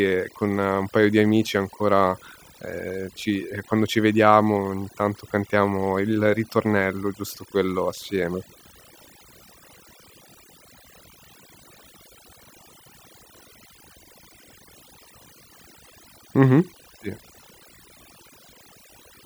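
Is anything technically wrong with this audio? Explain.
Yes. Throughout this speech clip, overdone noise removal is at work: a noise reduction stage set far too aggressively keeps pushing frequency bands near its noise estimate down or out, taking soft parts of the speech too. The background in the gaps drops and breaks up into twinkling specks.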